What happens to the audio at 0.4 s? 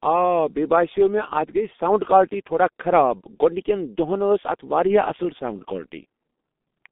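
The G.723.1 codec damage heard throughout is present at 0.4 s. Its slow, low-rate coding muffles and roughens the speech, with nothing above 3.6 kHz.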